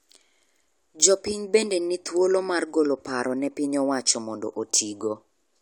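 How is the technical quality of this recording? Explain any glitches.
No technical faults are audible in this speech recording, so there are no glitches to explain.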